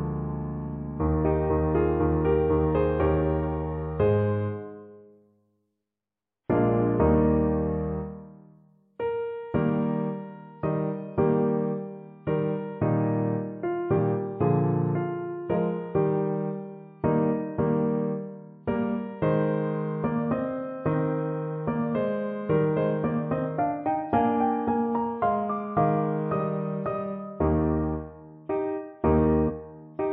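At 13.96 s, then 15.54 to 15.57 s and 29.47 to 29.51 s, compressed frames are skipped. The sound jumps ahead by about one, two and three 46.4 ms frames, so roughly 50, 100 and 150 ms of audio never plays. Unlike a dropout there is no silent gap. The audio simply lurches forward.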